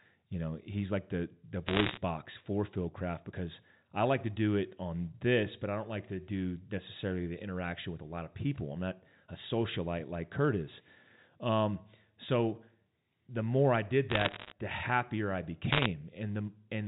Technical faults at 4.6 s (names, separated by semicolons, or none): none